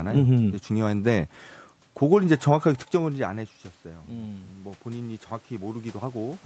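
Speech clip with automatic gain rising from 4.09 s to the end at about 6.46 s. The level arriving at the microphone drops by about 16 dB, so the gain control judges the input too quiet and raises its gain gradually. Voice and room noise swell together over the last two seconds or so, rather than the voice alone recovering. This is separate from the talker's movement around 3 s, and the call path's top end stops near 8 kHz.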